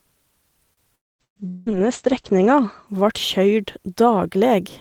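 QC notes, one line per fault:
0.73–0.80 s, short stall from a late packet: A packet arrived too late and the jitter buffer ran dry, so the receiver stretched the last bit of speech for about 38 ms until the data arrived, then resumed from the same point. Nothing is lost, but the sound there is held unnaturally long with a faint buzzy quality. Playback is 38 ms later than before from this point on.
0.95–1.22 s and 1.48–1.69 s, long network dropout: The likely cause is a stretch where no audio reached the receiver. In the first gap the last sound is carried on as a fading buzz that gives way to roughly a quarter second of near-silence, and about 240 ms of speech is never heard. In the second, about 180 ms is lost, covered entirely by a synthetic continuation that fades without going quiet, and speech then picks up further along.
1.09–3.36 s, call bitrate drop: The bandwidth estimate collapsed and the Opus encoder was pushed from 32 kbps down to 12 kbps, holding the lowest rate for about 1.2 s. 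At that rate it codes coarsely and cuts the audio band from 20 kHz to 8 kHz. The speech turns muffled and watery, losing sibilance and air, and becomes clear again only once the rate recovers near the end of the range.
1.25–1.39 s, burst of packet loss: Several consecutive packets, about 120 ms of audio, were lost or arrived too late to play. The concealer extended the preceding sound and faded it as the gap went on, giving a brief held buzz or hiss that sinks toward silence. Speech then jumps ahead with that slice missing. It lands inside the low-bitrate stretch, so the muffled tone continues on either side.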